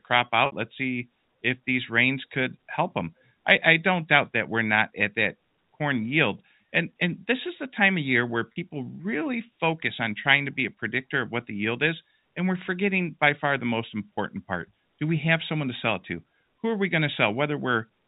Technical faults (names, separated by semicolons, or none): packet loss with pitch repetition